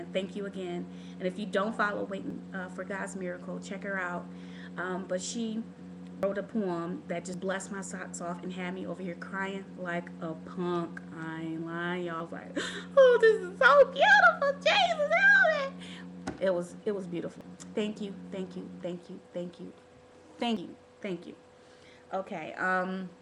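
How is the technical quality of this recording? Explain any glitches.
The recording has a recurring glitch. At 2.30, 6.23, 7.34, 12.20, 17.41 and 20.57 seconds, the sound jumps abruptly. Each jump skips about a tenth of a second. There is no gap of silence. The audio on either side is simply butted together. This points to a dropped buffer (overrun) as the likely cause. The capture software fell behind, and the hardware overwrote samples before they were saved.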